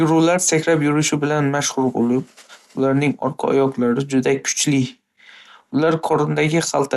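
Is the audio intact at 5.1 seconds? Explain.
No. At 5.1 s, as throughout, the speech sounds dull and gurgling, likely MP2 compression near 80 kbps: starved sub-bands switch off, leaving a spectrogram empty above 12.2 kHz, with flickering upper bands.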